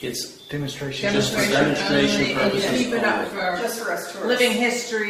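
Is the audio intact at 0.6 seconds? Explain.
No. An adaptive stream starting at a low bitrate covers 0.0 to 3.6 s. The dull, artefact-laden sound fits roughly 16 kbit/s Opus before the player steps up.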